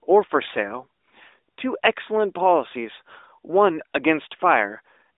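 Nothing in the speech stands out as a fault, so there's really nothing here worth flagging.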